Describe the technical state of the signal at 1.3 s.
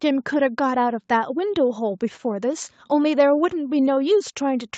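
At 1.3 s the speech is intact, with nothing beyond the ordinary call-path sound: the usual Opus coding and a bandwidth that stops at 8 kHz.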